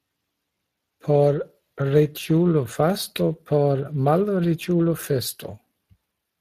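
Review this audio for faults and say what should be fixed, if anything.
Throughout the speech there is a rough, hoarse grain with a noisy texture layered onto the voiced sounds, and nothing is present above 15.3 kHz. This is Speex codec damage. Speex is a CELP coder that models the voice as a filter driven by an excitation signal. Here the excitation is coded coarsely enough that its errors are plainly audible as that grainy roughness, which points to a mid-range setting of roughly 22 kbps. To prevent this, record and deliver the speech with a modern codec such as Opus at an adequate bitrate, or keep it uncompressed, rather than passing it through Speex.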